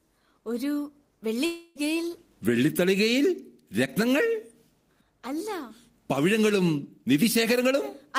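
From 1.45 to 1.78 s the sound smears into a fading buzz, likely a long network dropout; spectrogram bands blur and decay before audio resumes.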